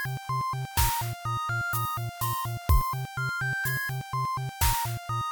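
No technical faults are audible.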